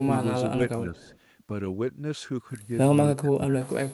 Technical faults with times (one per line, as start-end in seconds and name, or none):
0.06-0.12 speech suppressed in double talk
0.56-0.62 speech suppressed in double talk
0.89-1.13 speech suppressed in double talk
0.95-1.18 echo leak
3.11-3.92 speech suppressed in double talk